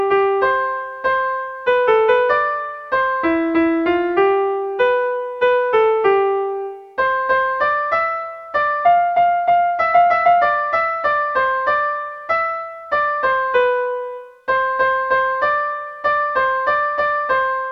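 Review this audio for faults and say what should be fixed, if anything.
Nothing to fix: no faults were found anywhere in the clip.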